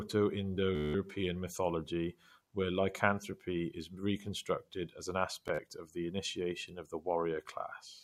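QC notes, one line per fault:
0.75–0.94 s, Bluetooth stutter: just before "mythology where lycanthropy is", about 190 ms of audio goes missing. The receiver keeps replaying its last tiny slice, so you hear a quick machine-gun buzz. Then the speech jumps ahead as though it had kept playing.
5.48–5.59 s, Bluetooth stutter: between "is reconstructed as an" and "of the initiation of", about 53 ms drops out in patches over roughly 110 ms, with the longest gap at 40 ms. The result is a shorter, choppier repeat.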